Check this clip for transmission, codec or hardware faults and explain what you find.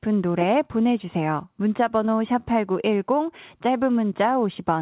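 One transmission fault is audible in this speech, which comes over a G.711 call path carrying nothing above 4 kHz. Short concealed packet loss occurs at 2.06 to 2.10 s. About 20 ms of audio arrived too late. The receiver continued the preceding sound and blended back, leaving a brief smear.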